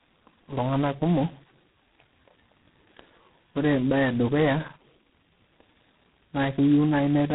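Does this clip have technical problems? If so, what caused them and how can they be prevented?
Yes. Tandem speech coding runs throughout: speech sounds rough, muffled and warbly, with nothing above 3.9 kHz, which fits three speech codecs in a row, such as G.726, G.723.1 and G.726 again. Prevent it by keeping one codec end to end or using transcoder-free operation at network borders.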